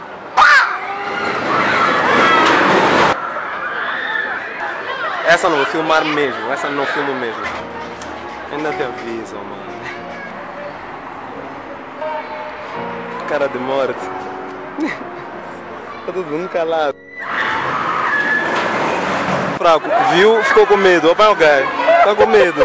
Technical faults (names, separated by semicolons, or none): none